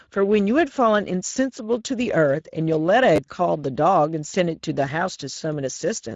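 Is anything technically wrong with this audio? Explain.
Yes, there are two faults.

Throughout the speech, Speex codec damage is plainly audible. This CELP coder gives the excitation too few bits, so the speech sounds noisy and hoarse. The band above 4 kHz is a shaped noise fill that stops at about 7.7 kHz. This fits a mid-quality setting.

At 3.16 to 3.18 s, a repeated buffer occurs. New audio arrived late, so the same short block, consistent with a 10 ms buffer, played two extra times with hard joins. This produces a brief buzzy stutter, and roughly 20 ms of audio is lost.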